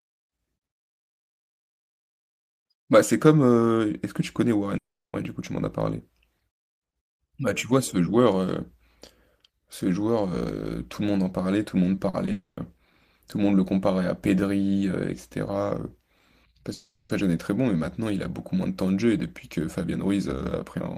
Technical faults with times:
4.77-5.15 long network dropout
11.95-12.29 short concealed packet loss
12.31-12.59 long network dropout
16.73-17.11 long network dropout

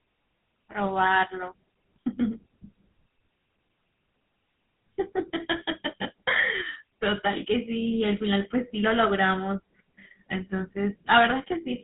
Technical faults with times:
0.00-11.84 GSM full-rate codec

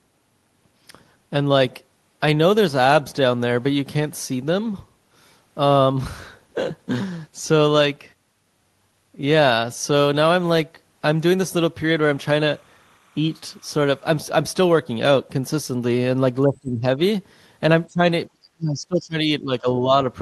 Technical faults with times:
11.77-14.20 timecode bleed
16.44-16.99 speech suppressed in double talk
17.85-19.67 speech suppressed in double talk

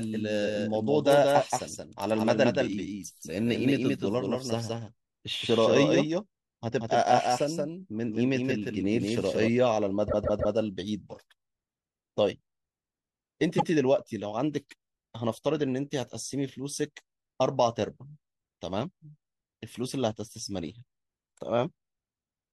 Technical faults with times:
0.00-9.48 doubled audio track
10.07-10.54 repeated frames
13.57-13.70 repeated frames

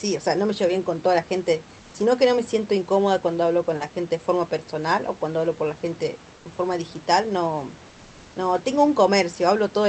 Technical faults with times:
1.79-1.93 comfort noise in place of the background
6.35-6.45 comfort noise in place of the background

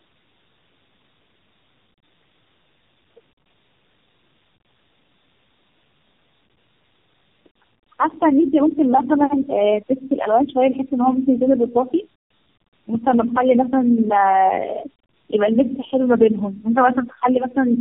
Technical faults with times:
0.00-17.80 tandem speech coding

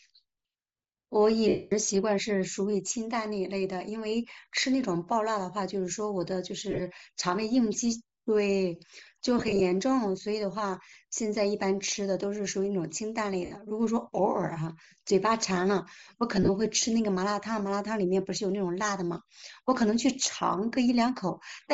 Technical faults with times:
0.00-21.73 Bluetooth LC3 compression
1.48-1.73 lost LE Audio frames
6.71-6.81 lost LE Audio frames
9.38-9.61 lost LE Audio frames
13.45-13.51 lost LE Audio frames
16.36-16.49 lost LE Audio frames

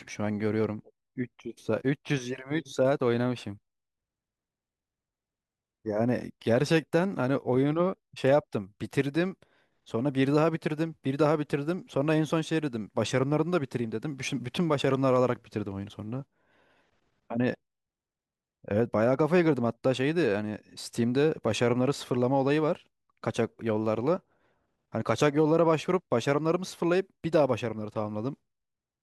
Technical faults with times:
none

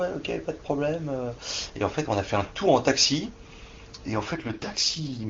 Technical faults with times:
4.33-5.29 AMR rate drop

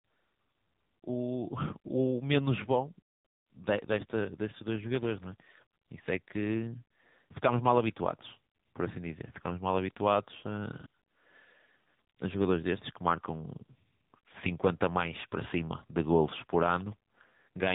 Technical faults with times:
0.00-17.75 AMR narrowband mobile codec

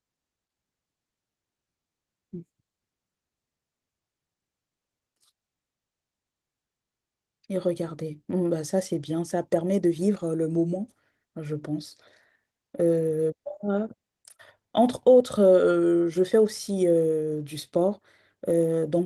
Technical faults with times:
none

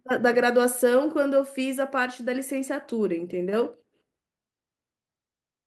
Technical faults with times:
none

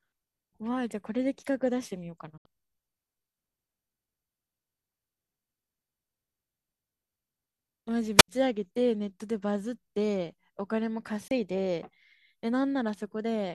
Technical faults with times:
2.38-2.46 digital broadcast dropout
8.17-8.28 wireless microphone squelch dropout
11.28-11.31 digital broadcast dropout

